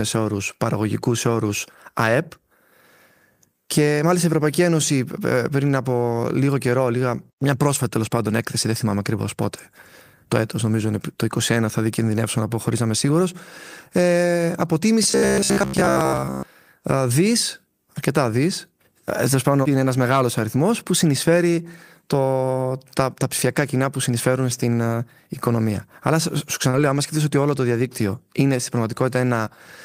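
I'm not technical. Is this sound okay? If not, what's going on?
No. There are three kinds of fault.

Lost packet rebuilt from error correction: at 8.95 to 9.05 s, right after "τέλο πάντων έκθεση δεν", and again at 26.73 to 26.99 s, just before "σκεφτεί ότι όλο το". Bits of the call went missing, but a rougher backup copy filled them in, about 60 ms the first time and 140 ms the second. You hear no gap, just a briefly grainier, noisier patch.

Robotic sound from repeated short buffers: from 15.03 to 16.43 s, ending just before "ε δι αρκετά δι". Most of this stretch is tiny slices of sound played over and over, likely because audio was arriving too slowly. That gives a steady metallic buzz of about 67 Hz lasting over a second, much longer than the other faults.

Short concealed packet loss: at 26.69 to 26.75 s, about 40 ms of sound never arrived. The receiver guessed it by stretching the sound just before, which gives a quick smear or wobble. 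That differs from the error-correction fix, which used real backup data.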